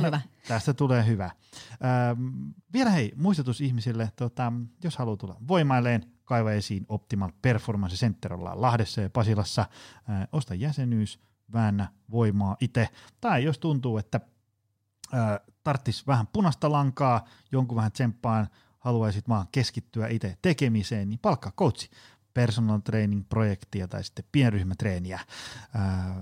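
No technical faults are audible anywhere in the speech.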